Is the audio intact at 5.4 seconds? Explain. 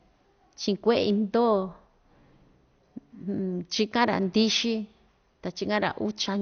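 No. At 5.4 seconds, as throughout the clip, the speech sounds dull and gurgling, with a granular edge and nothing above about 6.5 kHz. This is likely MP2 compression at a low bitrate near 48 kbps, switching off upper sub-bands and coarsely quantising the rest.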